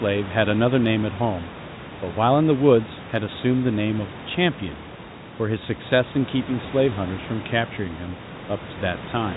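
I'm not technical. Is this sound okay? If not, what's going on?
Yes, nothing here sounds broken or faulty.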